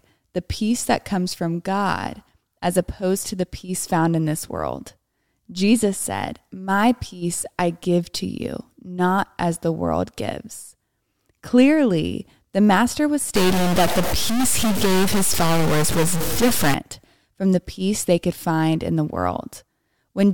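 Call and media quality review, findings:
Stuck bit, 13.35–16.74 s: harsh, buzzy distortion on the speech, with pauses filled by noise. Likely a data line or converter bit held at one value, shifting about half the samples by a fixed step of about -20 dBFS. Waveform shows squared-off jumps, and the spectrogram shows broadband haze.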